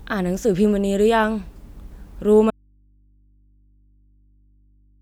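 An audio dropout to a faint residue begins at 2.51 s and runs to the end of this short speech clip. The speech cuts off abruptly in mid-flow rather than pausing or fading, and what remains is a low mains hum sitting roughly 40 dB below the speech level. The hum shows that the path after the break stayed live, which points to the source likely being disconnected and leaving an open input.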